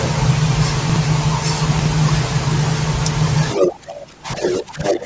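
At 0.77 to 0.96 s the sound jumps and stutters: chunks out of order. Short blocks, each 64 ms long, are played back in the wrong sequence, with one arriving two blocks late. The same thing happens at 1.73 to 1.86 s, this time one block late. It differs from a dropout because nothing is missing. The material is all there but shuffled, so the listener hears a brief scramble rather than a gap.

From 3.5 to 3.72 s a second voice breaks in, around 5 dB louder than the talker. This is the other side's voice leaking through. The likely cause is the far end's loudspeaker output reaching the microphone and escaping the echo canceller. It returns at 4.4 to 4.63 s and 4.84 to 4.99 s, roughly level with the talker.

Beginning at 3.54 s and running to the end, about one and a half seconds, the talker's level sags and breaks up, falling by as much as 20 dB or so. This is speech suppressed in double talk. 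The echo canceller, likely unable to separate the two voices, turns everything down. It differs from a plain dropout or a gain change because it comes from the echo canceller reacting to the far side's sound playing while the talker speaks.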